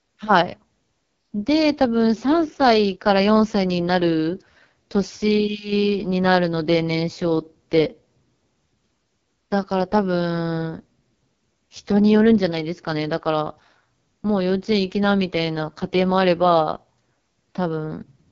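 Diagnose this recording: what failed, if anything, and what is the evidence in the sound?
Throughout the speech the sound is rough and raspy, and there is no content above about 7.2 kHz. This is the codec stage: AMR wideband (HD Voice) running at its lowest rate, which fits the 6.6 kbit/s mode. The pulse-driven vocal tract model has too few bits to shape each excitation accurately below 6.4 kHz, and the top band is only synthetic shaped noise.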